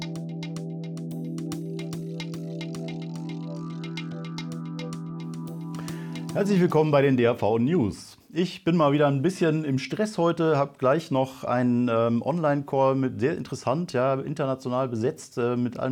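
No technical faults are audible.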